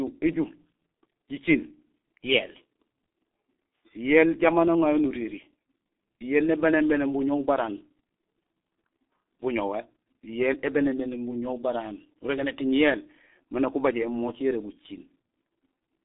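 Throughout the speech, the G.723.1 codec leaves it muffled and hoarse, with nothing above 3.8 kHz and a narrow band of 250 Hz to 3.6 kHz. Heavy damage fits a rate near 6.3 kbit/s. Unlike plain band-limiting, consonants smear because the voice model updates only every 30 ms.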